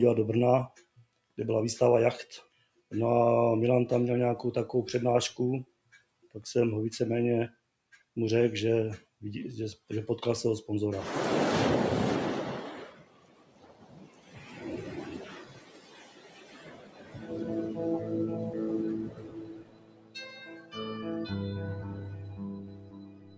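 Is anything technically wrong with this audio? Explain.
Yes. A speech noise suppressor was left running on non-speech material, so it treats steady, held sound as noise and rides its level around by roughly 20 dB, making the audio pump and thin out.

The clearest cuts from the noise suppressor land at 0.71–1.38 s, 2.44–2.91 s, 5.65–6.35 s, 7.51–8.16 s, 9.04–9.21 s, 12.89–17.31 s, 19.08–20.77 s and 21.78 s to the end. Sustained parts sink by about 15 dB and their tails get clipped short. The long stretch from 12.89 s is the longest.

The band stops around 8 kHz from the call's mic processing, which is expected.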